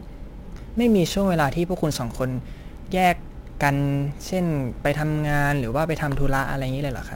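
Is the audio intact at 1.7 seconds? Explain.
No. Sample clock jitter runs through the whole clip, including 1.7 seconds. The converter's clock wavers by roughly 10 microseconds, so samples land early or late. Steep parts of the speech suffer most, leaving a hiss about 25 dB below it.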